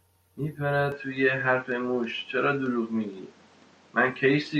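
An input switched to a poorer device at 0.92 s, and the speech stays on that path to the end. From that moment nothing above about 8.1 kHz remains, so the top sparkle and sibilant detail vanish and the sound turns duller and boxier. The likely cause is the recording system changing to another microphone or a headset's call profile with a narrower band. There is no gap at the switch and the level holds roughly steady, but a new background noise floor sits around 30 dB below the speech.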